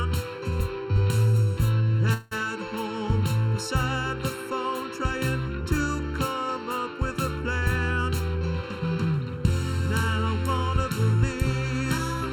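A hollow, phasey colouring runs through the whole clip, with the sound thinned as if heard through a tube. This is channel delay (comb filtering): one channel arrives late by a little under a millisecond, and when the two are summed to mono, content common to both cancels at regularly spaced frequencies. The first notch falls around 700 Hz, with further notches repeating upward at the same spacing, giving the fixed, hollow character.

From 2.13 to 2.33 s the sound stops moving forward. The last fragment is stretched into a brief, fading buzz for about 179 ms, with no drop to silence, and then the audio resumes exactly where it left off, with nothing skipped. This is a call audio freeze, likely caused by packets held up in transit and the jitter buffer running dry. The receiver filled the wait with concealment, so the audio is now about 179 ms later than before.

Between 8.09 and 9.22 s the sound becomes hurried, running at about 112% of its normal rate while the pitch stays unchanged. 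This is a jitter buffer speed-up. The buffer was holding more audio than its target, so the receiver repeatedly cut out short slices of one or a few pitch periods to catch up, removing around 150 ms in total across this stretch.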